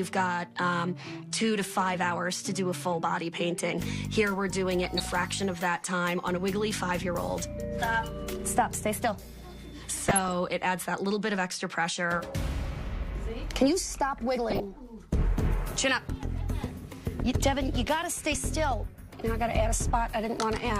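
DAB burbling runs through the audio at 4.84–5.10, 10.09–10.36, 14.50–14.65 and 18.71 s. Weak reception lets bit errors slip past correction, making single sub-bands jump in level.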